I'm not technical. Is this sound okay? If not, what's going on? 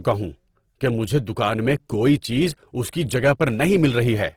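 No, not quite. All the way through, the speech has a rough, grainy, fizzy texture, as if the tone has been sanded down and sprinkled with noise. That's most likely Opus compression. When it's squeezed this hard, it keeps the overall balance of highs and lows, which is why the sound still reaches right up into the treble, but it patches over the details it can't afford with borrowed or noisy filler, and that's the roughness you hear.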